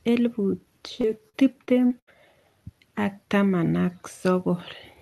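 A speech clip with repeated packet loss (robotic sound) from 1.01 to 2.09 s. Five short holes, the longest 79 ms, are patched by stretching the preceding sound, giving a choppy sound with pieces missing. This sets it apart from a single dropout or steady codec dullness, though the call path also limits the top end to roughly 12 kHz.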